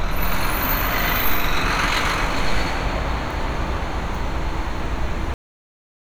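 At 5.34 s the audio hits a cut-off end: it stops dead in the middle of a sound and falls straight into digital silence for the remaining three-quarters of a second. There's no decay or natural tail at all. What happened is that the final stretch of buffers never got written out or played back, so whatever was sounding just gets chopped off at that point rather than finishing.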